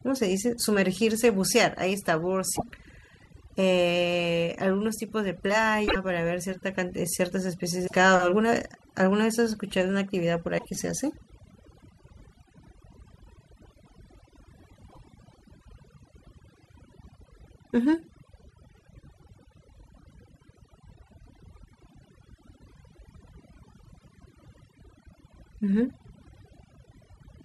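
This speech recording has overdone noise removal throughout: a noise reducer set far too aggressively is cutting individual frequency bands down or out whenever they sit close to its noise estimate, taking the quieter parts of the voice along with the noise. The result is a background pulled down but sprinkled with twinkling specks. On top of that there is damaged data in the compressed stream at five points: 2.53 to 2.63 s, 5.85 to 5.96 s, 7.84 to 7.93 s, 10.55 to 10.66 s and 14.87 to 14.98 s. At each, corrupted bytes leave the decoder misreading its frames, so it loses sync and hunts for the next valid frame header. Each lasts about a tenth of a second and is heard as a brief chirp, squawk, click or short hole.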